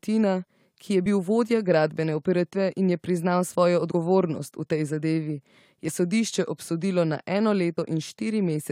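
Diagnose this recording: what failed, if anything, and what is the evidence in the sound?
Codec stage: compressed frames skipped at 7.77 s, where the speech jumps ahead by about 20 ms. There is no silent gap; the audio simply resumes further along.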